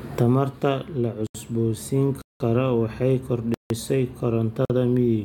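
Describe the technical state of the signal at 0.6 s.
At 0.6 s the signal is intact, with no audible dropout, distortion, noise burst or other fault at that moment.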